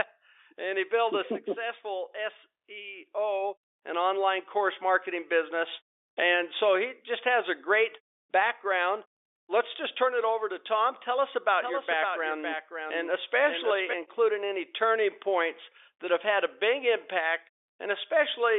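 From 11.62 s to 13.94 s a doubled audio track appears. A dry copy about 5 dB quieter trails the speech by about half a second, with no room tail, and ends abruptly just before "including any turning points". A slower second capture path is the likely cause.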